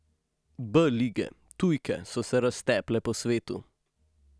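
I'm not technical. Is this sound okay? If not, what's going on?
Yes, this sound is okay, and nothing is going on that needs fixing.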